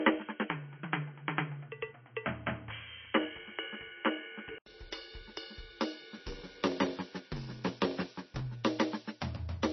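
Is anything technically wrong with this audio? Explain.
Yes, there are three faults in this music clip.

Throughout, nothing comes through above 6 kHz, and the sound has a watery, swirling quality with smeared attacks. This is likely heavy MP3 compression, consistent with a very low bitrate around 24 kbps. The encoder runs short of bits, cuts the treble at a fixed point, and drops weak frequency components that flicker on and off between frames. What distinguishes it from a plain filter is that swirl.

From the start to 4.66 s, the band is even narrower. The tone is dull and boxy, with a faint hiss sitting well below the music. At 4.66 s an 80 ms silence is followed by a change in level of a few decibels. This is likely an input switched to a poorer device. Unlike the codec damage, it is confined to one stretch and ends abruptly at the switch.

From 6.17 to 8.41 s, a block size mismatch (padded) adds a steady 93.8 Hz buzz, and the music runs at 0.861 times its speed. 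This fits a 512-sample buffer being read while shorter blocks are written, with the shortfall in each block filled with zeros. A random dropout would be irregular, whereas here the gaps repeat at a fixed rate.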